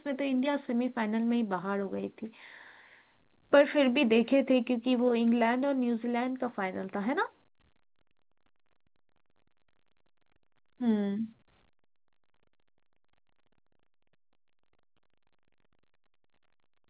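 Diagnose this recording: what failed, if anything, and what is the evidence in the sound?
Nothing failed; the call path stops at 4 kHz.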